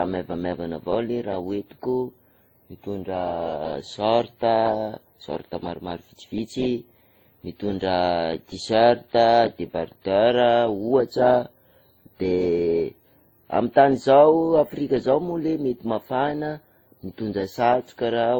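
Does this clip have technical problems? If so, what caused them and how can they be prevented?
Yes: transcoding between lossy codecs runs throughout the speech. It was likely WMA, then Opus, both near 32 kbit/s. Unlike single-codec damage, two distinct artefact textures overlap. Encode once from the original source.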